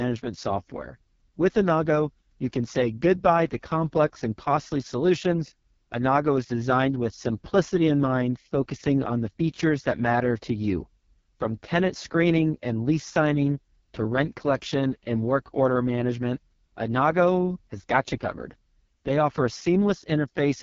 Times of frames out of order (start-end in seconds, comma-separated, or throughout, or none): none